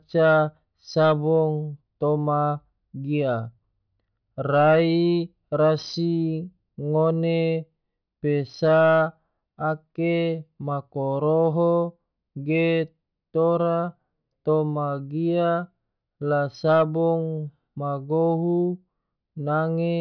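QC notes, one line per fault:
Nothing stood out on listening to the speech.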